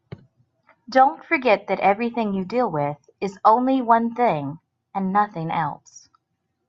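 No faults detected anywhere in the speech.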